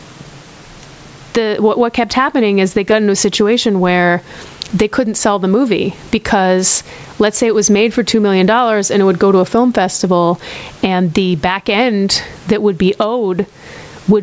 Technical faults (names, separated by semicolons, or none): gain pumping